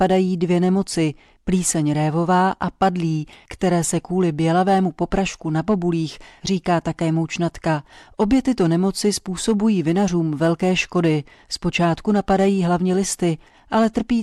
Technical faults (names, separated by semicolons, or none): hard clipping